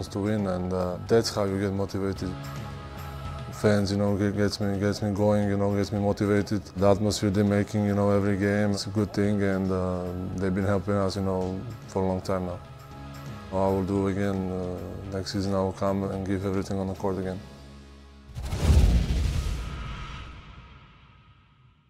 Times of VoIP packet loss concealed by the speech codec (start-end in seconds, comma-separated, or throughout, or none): none